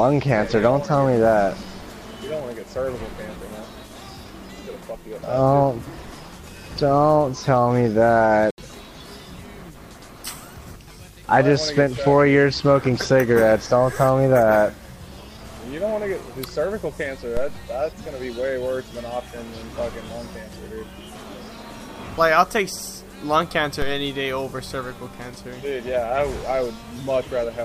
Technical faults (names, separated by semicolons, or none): Bluetooth dropout; DC step